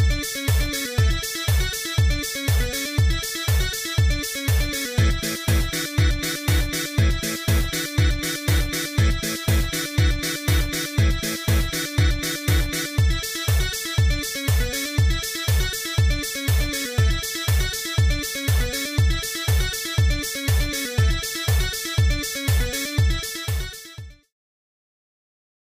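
There are no technical faults to describe.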